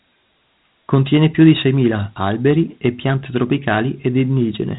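Speech with Dialogic VOX ADPCM throughout. Nothing sounds above 3.8 kHz, and gritty hiss follows the voice. The coarse 4-bit steps suggest about 32 kbps at 8,000 samples a second.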